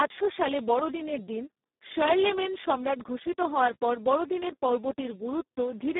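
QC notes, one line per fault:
throughout, Speex codec: an excitation starved of bits, fitting about 4 kbps, makes the speech noisy and hoarse, confined to 200 Hz–3.7 kHz with nothing above 3.8 kHz.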